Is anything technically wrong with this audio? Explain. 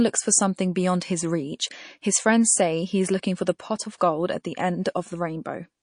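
Yes, two things. Throughout, the speech sounds watery, likely from MP3 compression at a low bitrate, which fits roughly 40 kbps starving the encoder.

Then pre-echo around 3.98 to 4.01 s, between "for the pot of" and "gold at the": a hiss about 18 dB up smears ahead of the attack, as if the encoder stayed on long blocks.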